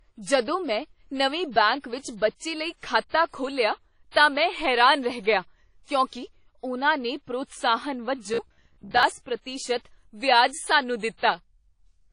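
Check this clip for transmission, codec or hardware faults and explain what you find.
Three faults are audible in this speech: codec damage throughout, two pre-echoes, and one robotic stretch.

WMA compression, throughout: ringing, washy hiss that breathes with the voice. A transform codec at a bitrate around 32 kbps is the likely cause. Unlike clean band-limiting, the hiss moves with the signal.

Pre-echo, 3.09 to 3.14 s before "ਖੋਲ੍ਹਿਆ ਤਾਂ ਮੈਂ ਹੈਰਾਨ" and 4.11 to 4.16 s before "ਤਾਂ ਮੈਂ ਹੈਰਾਨ ਰਹਿ": a 44 ms hiss leads each attack, because block noise fills the quiet before the onset. The smear comes before the attack, not after it.

Robotic sound from repeated short buffers, 8.34 to 9.03 s, after "ਕਿਉਂਕਿ ਉਨ੍ਹਾਂ ਨੇ ਪ੍ਰੋਤਸਾਹਨ": a rigid metallic buzz at 66.7 Hz, which fits a repeated 15 ms buffer. A large share of the audio is repeated rather than new. Unlike codec ringing, the pitch stays fixed.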